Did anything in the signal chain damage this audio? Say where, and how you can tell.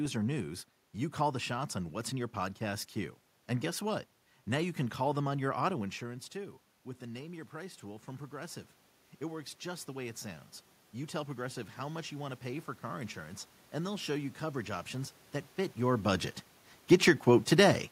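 Yes. Automatic gain rising in the call processing stage. Around five and a half seconds the talker moves away, and the input falls by about 13 dB. After "them on your auto", from 6.0 s to 14.92 s, the AGC slowly pushes its gain up by about 11 dB. Voice and room noise swell together, which shows the gain stage is responsible and not the talker. The rise ends just before "that fit your budget".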